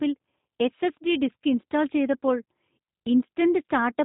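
G.729 codec damage runs through the whole speech clip: nothing above 3.8 kHz survives, and the speech sounds rough and faintly synthetic, as expected when each 10 ms frame is rebuilt from a vocal tract filter, pitch predictor and sparse pulses, which fits an 8 kbit/s G.729A stream.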